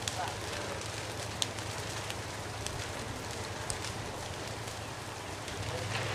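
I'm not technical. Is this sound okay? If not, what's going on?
Yes, nothing stood out as a problem when listening to this sound.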